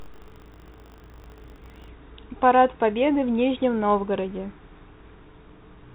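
From 0.0 to 1.9 s the speech carries a rattling 50 Hz buzz from buffer tearing: writer and reader cross inside each 20 ms buffer, splicing in a small slice of audio from one lap earlier. Unlike mains hum, the buzz falls silent between words. The light, band-limited G.726 coding at 32 kbit/s is separate from this.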